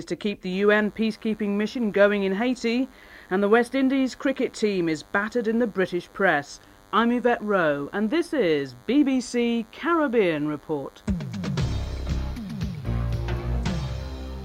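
A nearby DECT cordless phone or base station is radiating short radio bursts every 10 ms, and the audio circuitry is rectifying them into the signal. The result is DECT cordless phone buzz: a steady, thin 100 Hz buzz rich in harmonics, sitting well below the main sound, from 0.53 s through to the end.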